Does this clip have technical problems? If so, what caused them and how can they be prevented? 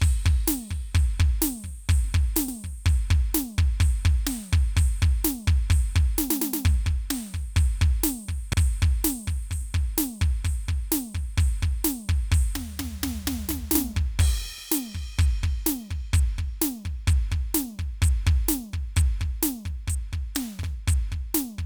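Yes. The music has overlapping chunks. A short stutter occurs at 2.48–2.53 s, 8.53–8.58 s, 14.58–14.63 s and 20.63–20.68 s. The audio was handled in 6-second chunks, and each chunk begins 50 ms before the previous one ended. That 50 ms slice plays twice at every join, producing a regular hiccup every six seconds. To prevent it, make each chunk start exactly where the last ended, or crossfade and discard the overlap.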